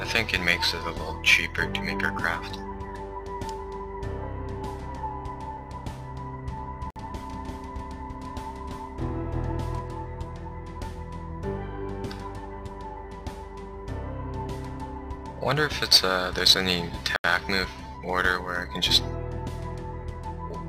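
From 6.57 s to 9.79 s a doubled audio track runs under the sound: a second, full-band copy trails the original by roughly 0.3 s at about the same level, with no reverb tail or room colouring, and it switches on and off abruptly at both ends. The likely cause is a second capture path lagging behind the first, or an edit that left two copies out of alignment. On a spectrogram every onset shows a twin roughly 0.3 s later, and the waveform thickens over that span.

Inside that span, at 6.90 s, a Bluetooth stall drops the sound to dead silence for 55 ms, and a second stall at 17.16 s lasts 80 ms. Each time playback then picks up again. The likely cause is wireless interference delaying packets until the headphones' buffer emptied and the player waited for the resends. On a waveform both appear as flat gaps with hard edges, and a spectrogram shows them as clean vertical blank strips running through every frequency.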